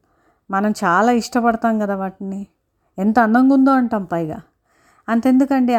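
No technical faults are audible anywhere in the recording.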